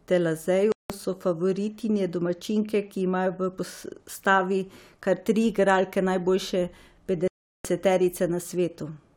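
At 0.72 s the speech drops into silence for about 0.18 s, then resumes. At 7.28 s it happens again, lasting about 0.37 s until 7.65 s. Both gaps sound like a Bluetooth stall. Interference likely delayed packets and the receiver's buffer ran dry.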